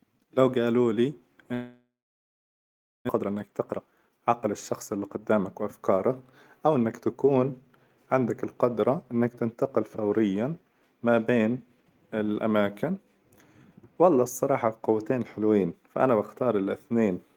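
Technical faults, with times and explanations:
1.53–3.11 s, long network dropout: Right after "لو قالولي" the speech stops arriving. The receiver briefly carries on the last sound as a fading buzz, then about 1.16 s of near-silence follows. Roughly a second of speech is never heard, and the delay shifts by about half a second. On a waveform, the envelope decays into a flat line. A spectrogram shows smeared, repeating harmonics fading into an empty band. A network outage is the likely cause.
3.15–6.21 s, jitter buffer speed-up: Speech runs at about 116% speed with unchanged pitch and sounds hurried. After the gap, the buffer held more audio than its target. To shed about half a second of backlog, the receiver repeatedly cut out short pitch-period pieces. On a spectrogram, harmonic spacing stays the same while syllables and gaps are compressed in time. The waveform shows tighter, shorter voiced segments with small splice points between periods.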